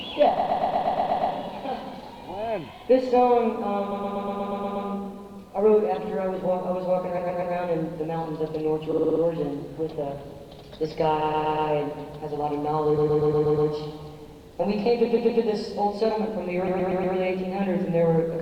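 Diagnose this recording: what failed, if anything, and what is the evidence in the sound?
Repeated frames at 0.37, 3.91, 7.17, 8.91, 11.21, 12.97, 15.05 and 16.67 s: compressed 120 ms blocks (60 ms at 8.91 s) replayed several times, producing stutters and lengthening the audio.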